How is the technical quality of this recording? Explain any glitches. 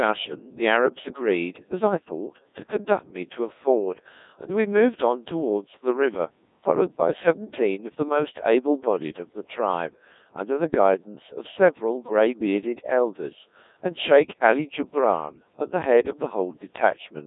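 Quality is poor: the speech has been through a very low-rate vocoder for its whole length. Codec 2 vocoder damage runs throughout. The decoder rebuilds speech from pitch, voicing, energy and envelope as sine waves, which fits the 1.6 kbit/s mode. Voices sound robotic and buzzy in a 200 Hz to 3.7 kHz band, with nothing above 3.8 kHz. Unlike plain band-limiting or waveform-codec smearing, the original waveform itself is gone.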